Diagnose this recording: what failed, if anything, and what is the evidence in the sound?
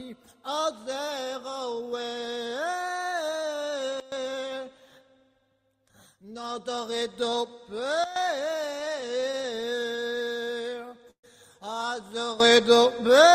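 Sudden gain jump, driver or processing stage: level and background noise drop together by about 17 dB at 4.0 s and about 12 dB at 8.04 s, then rise about 12 dB at 12.40 s. Likely an unramped digital gain step.

Repeated stalls (stutter), network and jitter buffer: between 8.79 and 10.49 s, fifteen brief gaps, the longest 17 ms, are filled by continued sound. The audio drags, with nothing lost.

Jitter buffer slow-down: from 10.55 to 11.01 s, the sound plays at 92% speed with unchanged pitch, stretched by 46 ms as repeated periods rebuild the buffer reserve.

Call audio freeze, network: at 11.11 to 11.25 s, sound is extended and then silent for about 80 ms before resuming. This is likely an emptied jitter buffer adding 129 ms of delay.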